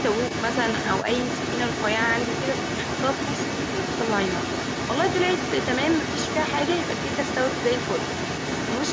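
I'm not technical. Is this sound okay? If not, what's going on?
No. From 0 to 8.9 s a second voice runs almost as loud as the talker: the other side's voice leaking through, likely from incomplete echo cancelling, not someone in the room.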